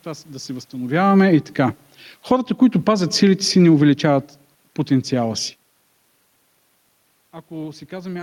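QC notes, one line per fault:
2.16–5.63 s, automatic gain falling: just after "се възстановяваме и така" the level eases down about 5 dB. Gain control judged the input too loud or its background noise too strong, so speech and room noise sink together.
2.38–3.41 s, automatic gain rising: gain control judged the input too quiet and lifted it about 5 dB. Speech and background swell together over roughly a second.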